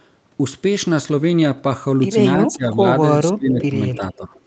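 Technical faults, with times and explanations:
2.48–2.85 s, 3.35–3.77 s and 3.97–4.34 s, speech suppressed in double talk: the speech dips by about 15, 20 and 10 dB in those spans. The likely cause is an echo canceller that turned its own talker down while the far side spoke. The waveform envelope sags, and the spectrogram thins and gaps there.
3.5–3.65 s and 3.93–4.14 s, echo leak: a faint copy of the speech returns 300 ms late, about 15 and then 20 dB below the direct sound. It is likely loudspeaker pickup that the far end's canceller did not fully remove. The spectrogram shows weak, delayed repeats of the earlier harmonic patterns.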